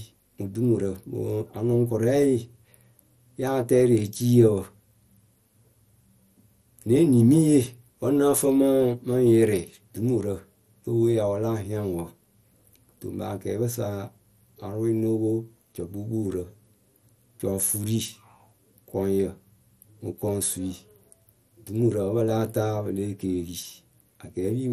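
Speech, with MP2 compression damage throughout. The top is dull, with nothing above 14.9 kHz. A gurgling, granular texture likely comes from starved sub-bands, fitting a rate near 64 kbps.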